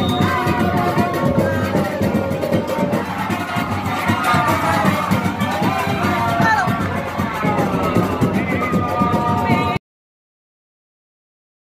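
At 9.77 s the sound stops abruptly mid-sound and falls straight to digital silence with no decay, a cut-off end where the final buffers were never written or played.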